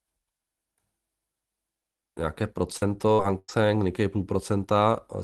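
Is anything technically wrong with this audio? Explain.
Yes. The speech has a cluster of packet-loss damage between about 2.77 and 3.51 s, heard through an Opus call path at 32 kbps whose 12 kHz bandwidth limit is audible as a capped top end.

Short concealed packet loss, 2.77–2.84 s: About 40 ms of audio never arrived in time, so the receiver extended the preceding sound for roughly 36 ms before blending back into real audio. It registers as a brief smear or wobble, and a short sound there can drop out.

Burst of packet loss, 3.14–3.22 s and 3.39–3.51 s: Consecutive packets were lost, about 40 ms and then 100 ms of audio. The decoder continued the last sound for roughly 46 ms and 96 ms, fading it as the gap lengthened. The result is a held, decaying tone or hiss, then speech resuming with the intervening part missing.

Lost packet rebuilt from error correction, 2.81–2.83 s, 3.18–3.20 s and 3.48–3.50 s: Inside each damaged region, one 20 ms packet was restored from the low-bitrate copy carried in the following packet. 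These frames have no gap but sound coarser and noisier than the surrounding audio.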